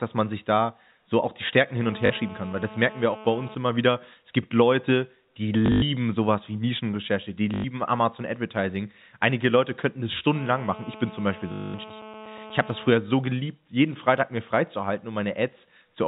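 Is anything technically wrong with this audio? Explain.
Yes, there are two kinds of fault, heard over a telephone-band speech signal that stops at 4 kHz, as expected from G.711 A-law coding.

GSM phone buzz occurs from 1.83 to 3.55 s, ending just before "immer wieder", and again from 10.35 to 12.91 s, between "könnten es" and "so geliebt jeden". A nearby 2G phone on a call transmits in bursts about 217 times a second, and the audio circuitry rectifies those radio pulses. The result is a raspy 217 Hz buzz rich in harmonics, about 18 dB below the speech and unrelated to it.

Packet loss with last packet repeated appears four times. At 2.06 to 2.10 s, 40 ms is lost. From 5.66 to 5.82 s, just before "sowas wie", 120 ms is lost, scattered over 160 ms with a longest run of 100 ms. From 7.54 to 7.64 s, 100 ms is lost. From 11.52 to 11.74 s, 220 ms is lost. The receiver replays the last good packet until new ones arrive. 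The durations fit 20 ms packets, so each run produces a robotic stutter fluttering at about 50 Hz, with possible clicks where the repeats join.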